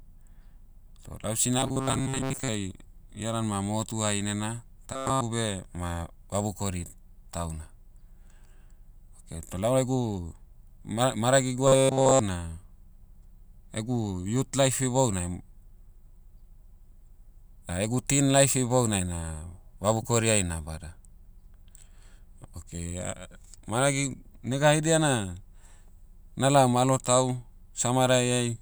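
Speech with robotic sound from repeated short buffers at 1.59–2.48 s, 4.93–5.23 s and 11.68–12.19 s: a rigid metallic buzz fixed at 133 Hz, likely a 7.5 ms chunk replayed over most of the real audio. Unlike codec warble, its pitch never moves.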